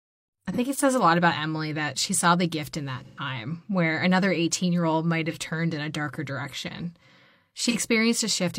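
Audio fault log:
0.52 s, 5.31 s, 7.69 s: AAC frame loss with concealment. Each time about 43 ms of coded audio went missing, roughly one frame's worth, and the decoder filled the gap from the last good spectrum, so each spot sounds briefly smeared and noisy rather than dropping out.
3.05–3.19 s: AAC frame loss with concealment. A longer gap of 128 ms, consistent with three frames lost in a row, was patched the same way, giving a longer phasey, washed-out stretch.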